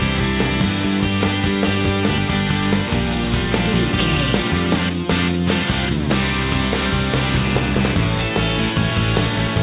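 From 4.42 to 5.65 s and again from 8.71 to 9.56 s, a jitter buffer speed-up trims pitch-period slices to drain excess delay, so the sound runs about 7% and 5% fast and hurried, losing about a tenth and a twentieth of a second. Unlike resampling, pitch stays unchanged. The narrowband G.711 call path passes nothing above 4 kHz.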